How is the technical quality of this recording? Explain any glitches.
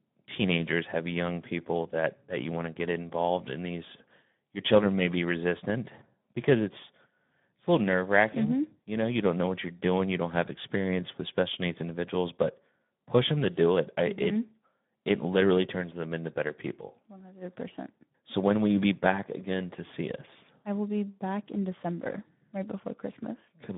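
The technical quality is poor. Throughout, the speech carries Speex codec damage: the sparse excitation makes it hoarse and noisy, and the spectrogram shows smeared harmonics, consistent with roughly 11 kbps. The content is confined to about 150 Hz to 3.6 kHz.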